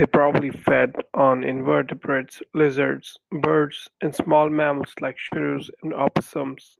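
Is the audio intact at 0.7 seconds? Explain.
No, 0.7 s falls inside a stretch of lost packets rebuilt from error correction, from 0.49 to 0.99 s, just before "on invertebrates lizards birds". There's no gap because the decoder played low-bitrate backup copies of the missing packets, so the speech turns rough and noisy there.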